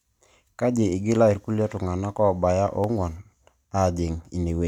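At 1.34 s, just before "ilrkulie tung'anak", and again at 2.84 s, single sharp clicks are heard, likely dropped samples. A fraction of a millisecond is lost, unlike a dropout, where a stretch of sound vanishes.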